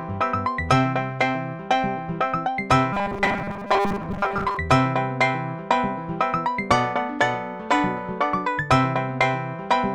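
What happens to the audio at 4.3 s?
At 4.3 s the audio is inside a stretch of robotic sound from repeated short buffers, running from 2.93 to 4.57 s. New audio is likely arriving too seldom, so the playback keeps looping the last fragment, which fits a buffer of about 5 ms, for roughly 70% of the time while real audio is skipped. Those repeats stamp a fixed 200 Hz pitch onto the sound, turning it into a rigid, metallic buzz that only loosely tracks the original.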